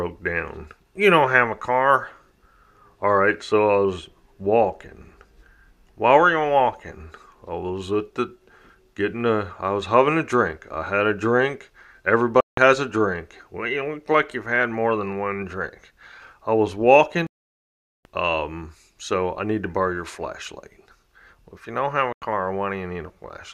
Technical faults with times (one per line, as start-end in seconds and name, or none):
12.41-12.58 Bluetooth dropout
17.27-18.05 Bluetooth dropout
22.13-22.22 Bluetooth dropout